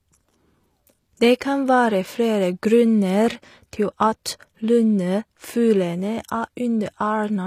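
From start to finish the speech carries plainly audible HE-AAC compression damage, likely at a bitrate around 24 kbps. Its treble is rebuilt, not coded, so s sounds come out gritty and metallic, with nothing above 14.9 kHz.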